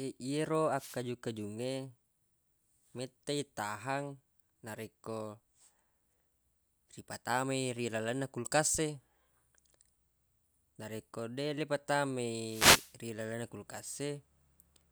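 At 0.75 to 1.01 s and again at 12.38 to 12.98 s, a wireless microphone noise hit sweeps through the speech as a swish of static: the FM radio link fades, receiver noise swells over the voice, then recedes, unlike a digital dropout's abrupt silence.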